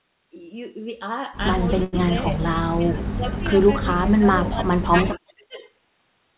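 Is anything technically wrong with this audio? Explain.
Yes. The speech has a short stall from a late packet, three stretches of speech suppressed in double talk, and a brief echo leak. All of it sits inside a narrowband path with nothing above 4 kHz, which fits G.711 mu-law at 64 kbps.

At 1.84 to 1.95 s the sound freezes for about 86 ms. A packet arrived late, the jitter buffer ran dry, and the receiver stretched the last sound until the packet came, then resumed without losing anything. It is heard as one syllable held unnaturally long. On a spectrogram the harmonics run flat and repetitive for that span, and the waveform shows a looped, periodic block.

The speech dips three times, at 2.69 to 3.54 s, 4.02 to 4.27 s, and 4.44 to 5.63 s. The likely cause is double-talk suppression: with both ends talking, the echo canceller could not separate the near talker from loudspeaker echo and attenuated both. 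The drops reach about 20 dB, about 35 dB and about 30 dB respectively, affecting roughly half a second, a fifth of a second and a full second. They sound like the voice ducking, thinning or chopping out. The waveform envelope shows sudden notches, and the spectrogram shows energy fading, upper bands first.

From 5.14 to 5.33 s a faint, delayed copy of the voice appears, about 15 dB below the speech and lagging by 410 ms. This is likely an echo leak, where loudspeaker sound reached a microphone and slipped past that end's echo canceller. It sounds like a ghostly repeat. A spectrogram shows weak harmonic traces mirroring earlier speech shifted 410 ms later, and the waveform shows a small smeared bump under the main signal.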